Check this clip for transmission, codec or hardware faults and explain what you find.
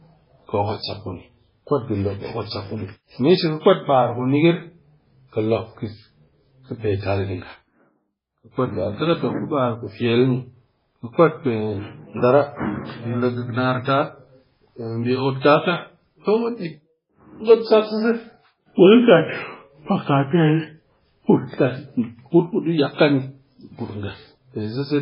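One codec fault runs through the whole speech clip. Throughout, the speech sounds watery and swirly, smeared at onsets, with nothing above about 5.3 kHz. This is likely MP3 compression: heavily starved of bits, consistent with roughly 16 kbps, the encoder cuts the treble and lets weak frequency lines flicker between frames.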